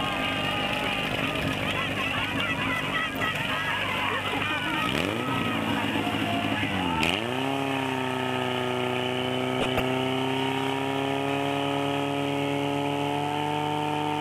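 A steady, raspy buzz sits under the audio for its whole length, fairly prominent at roughly 15 dB below the programme. This is mains buzz: sharp switching spikes from a dimmer, rectifier or unshielded cable enter the signal twice per 50 Hz cycle, producing harmonics that reach up into the kilohertz range. Twice the sound breaks up into burbling, from 3.01 to 3.28 s and from 9.61 to 9.80 s. That is DAB burbling: under weak reception a small share of bit errors slip past error correction into the MP2 data, so corrupted samples put short blips of noise into single sub-bands, and corrupted scale factors make sub-bands jump in level for up to a frame.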